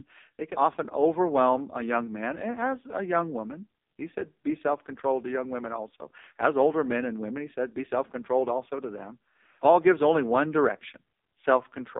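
Speech throughout, heard through an AMR narrowband mobile codec. Nothing passes above 3.7 kHz or much below 250 Hz. The buzzy, synthetic texture fits a low mode near 5 kbps.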